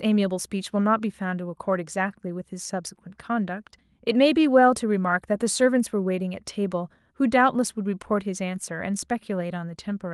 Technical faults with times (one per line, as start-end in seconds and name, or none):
none